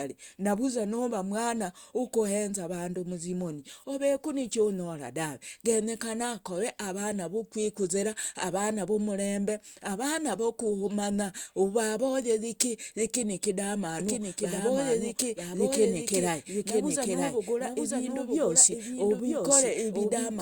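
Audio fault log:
14.00 s to the end: doubled audio track. A second full-band copy of the speech enters abruptly, trailing by about one second at about 5 dB down, likely from a slower capture path. Unlike an echo, it has no decay or room colouring.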